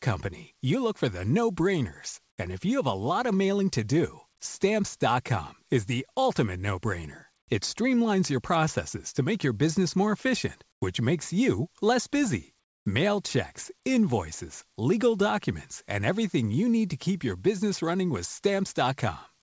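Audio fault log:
10.72 s and 12.64 to 12.86 s: comfort noise in place of the background. After "your business more efficient" and after "makes you less busy", the real background gives way to steady, featureless synthetic noise. The first patch lasts 100 ms and sits about 8 dB louder. The second lasts 220 ms and sits about 11 dB quieter. The likely cause is discontinuous transmission filling the pauses.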